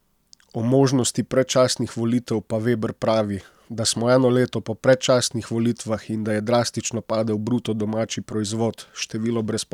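A speech recording with no technical faults heard anywhere.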